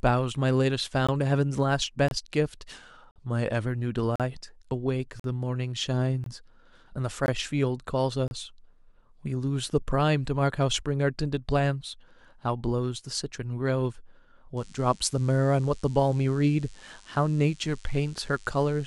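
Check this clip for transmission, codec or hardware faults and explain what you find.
Three faults are present.

Gap between stream segments at 1.07, 2.08–2.11, 3.11–3.16, 4.16–4.20, 5.20–5.24, 6.24–6.26, 7.26 and 8.28–8.31 s: segment timestamps leave holes every second, filled with silence, producing hard-edged dropouts of 16 to 48 ms.

Drift correction step from 2.75 to 3.66 s: the speech slows by about 5.3% and drops about 95 cents, nearly a semitone, then snaps back. This is likely a clock-matching stage adjusting its buffer.

DECT cordless phone buzz from 14.57 s to the end: rectified 100 Hz radio bursts add a thin, harmonic-rich buzz, roughly 30 dB below the speech.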